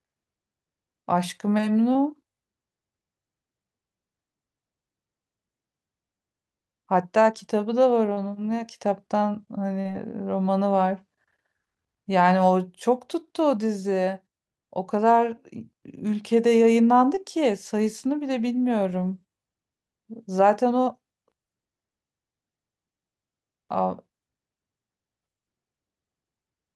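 A speech recording with short concealed packet loss at 1.93–1.97, 8.13–8.19, 9.81–9.87 and 17.15–17.19 s, where 20–40 ms never arrived. The decoder extended the preceding sound and blended back, giving brief smears rather than the hard silent gaps of an unconcealed dropout.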